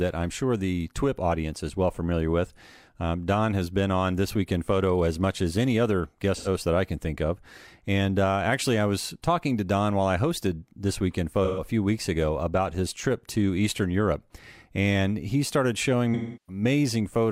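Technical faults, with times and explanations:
6.36–6.48 s, 11.44–11.64 s and 16.14–16.62 s: AAC frame loss with concealment. Brief smeared, noisy patches of about 85 and 128 ms, and a longer 341 ms loss that fades toward a faint noise floor and back in, consistent with two, three and eight missing AAC frames, which the decoder papered over by reusing the last good spectrum.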